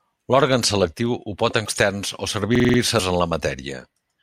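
At 1.65 to 1.68 s, and again at 2.96 to 3.00 s, damaged data in the compressed stream throws the decoder off its frames. It loses sync and hunts for the next header, so each spot comes out as a brief glitch. Between them, from 2.55 to 2.79 s, a system hang loop occurs: the machine stalls while the sound hardware keeps replaying its ring buffer. A 46 ms slice, which fits a 2048-sample buffer, repeats five times at about 21.5 Hz, giving a rapid machine-gun stutter. Almost nothing is skipped afterwards.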